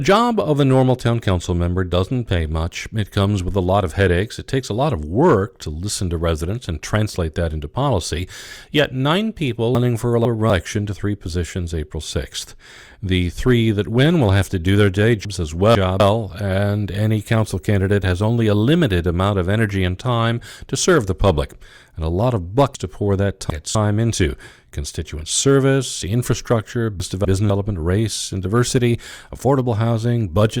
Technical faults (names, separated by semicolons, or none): chunks out of order; video or display buzz